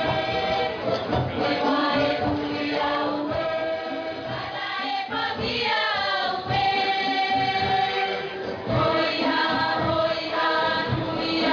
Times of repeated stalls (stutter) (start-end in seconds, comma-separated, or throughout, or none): none